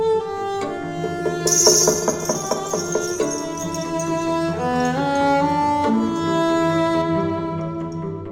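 From 7.02 s to the end, the music turns dull and muffled, as de-emphasis applied wrongly cuts the treble smoothly, about 10 dB down at 10 kHz.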